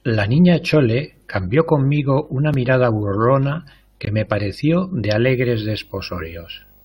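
A speech clip with two separate faults. At about 4.05 s there's a gap between stream segments, a hard-edged hole of roughly 17.5 ms where the player filled a timing gap with silence at a segment join, which fits 4-second segments. Nothing's actually missing. From 5.26 s to the end you get video or display buzz, a 50 Hz field-rate buzz with hash on top and a thin whine at 15.6 kHz from the line rate. It's faint, sitting well below the speech, from a screen or video cable coupling into the audio path.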